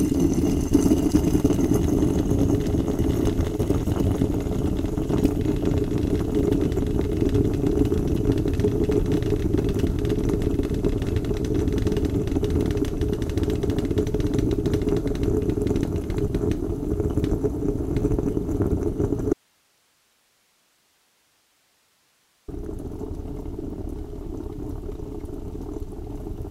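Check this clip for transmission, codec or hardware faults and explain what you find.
One fault stands out: an audio dropout to a faint residue. From 19.33 to 22.48 s the sound cuts off abruptly for about 3.1 s. Only hiss remains, roughly 40 dB below the signal. The likely cause is a lost signal feed while the path after the break stayed live.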